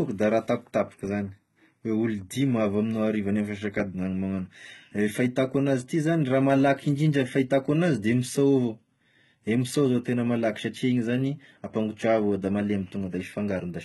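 HE-AAC compression throughout: the treble, cut off above 11.8 kHz, is likely rebuilt from copied lower bands, fitting about 16 kbps, so sibilants sound gritty and metallic.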